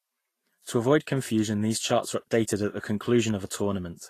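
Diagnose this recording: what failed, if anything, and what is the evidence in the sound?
The codec stage is the likely culprit: Vorbis compression at a low setting, consistent with about 35 kbps. Throughout the speech the treble sounds hissy and grainy, tones are roughened and attacks blurred, because coarsely quantised high-frequency detail turns into noise of similar energy.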